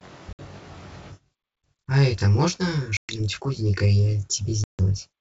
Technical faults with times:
0.00-5.20 channel delay (comb filtering)
0.33-0.41 packet loss on an ADPCM call
2.97-3.20 packet loss on an ADPCM call
4.64-4.81 packet loss on an ADPCM call

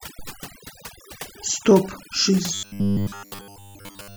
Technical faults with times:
0.00-4.16 overdone noise removal
2.54-4.16 robotic sound from repeated short buffers

